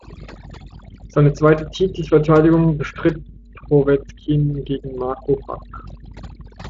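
Right from the start and all the way through, you can hear overdone noise removal. The denoiser was pushed too hard, so any frequency band sitting close to its idea of the noise floor gets pulled way down or switched off, and the softer parts of the speech get dragged along too. That's why the gaps between phrases drop to near silence with little twinkly specks. Under that there's the Speex coding, with its light damage and nothing above about 7.6 kHz.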